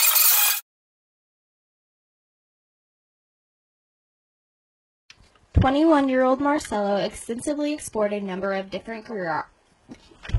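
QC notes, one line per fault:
2.45–10.38 s, adaptive stream at a lower bitrate: at 2.45 s the quality falls abruptly with no gap and stays down to the end. Nothing remains above 11.5 kHz and coding artefacts become more audible, consistent with the player switching to a much lower-bitrate rendition after the connection slowed, plausibly a 96 kbit/s AAC stream giving way to one around 12 kbit/s. Unlike a dropout or buffering stall, there is no silence or break at the switch.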